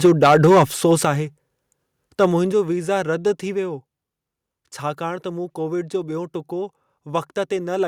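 From 0.04 to 1.05 s the speech carries a harsh, crackling edge on its loudest syllables. This is likely microphone overload. The peaks run about 6 dB past the converter's ceiling, and about 5% of the waveform has its tops flattened. At 0.06 s the level drops by about 2 dB, with voice and background falling together. That is the microphone volume being stepped down. The crackle continues, so the cut was not enough.

At 1.05 s a bigger step follows, about 7 dB down. The distortion stops there. At 2.22 s a brief clipped peak returns, about 2 dB over, and its rough edge lasts to 2.25 s. At 2.52 s the level steps down again, about 5 dB. Each drop is sudden and hits the background as much as the voice. These steps are likely the call software cutting an input gain that it detects as too hot.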